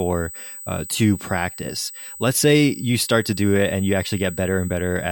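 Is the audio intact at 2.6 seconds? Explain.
No. At 2.6 s the speech carries USB whine, present across the whole clip: a steady, fixed-pitch tone at 8 kHz, strongest at 16 kHz, roughly 15 dB below the speech. It comes from the bus drawing current in 125-microsecond microframes that leak through power or ground. Unlike mains hum, it sits high, not at 50 or 60 Hz.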